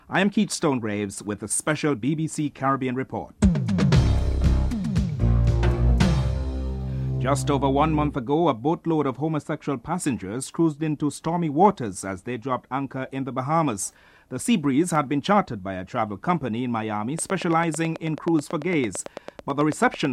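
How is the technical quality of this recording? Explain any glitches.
The recording carries one clear glitch near the end. From 17.19 to 20.06 s there is a train of clicks: roughly thirty near-identical pops at a steady 9.1 per second, standing about 10 dB above the sound and ticking through pauses too. The likely cause is electrical interference or a struggling interface. The even spacing and matching shape separate it from random crackle or a single dropout.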